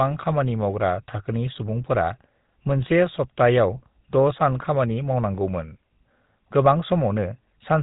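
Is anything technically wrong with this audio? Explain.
Yes. Throughout, the speech passes through the GSM full-rate codec. A sparse pulse excitation gives a buzzy, gravelly roughness, and nothing above 4 kHz passes, fitting 13 kbps.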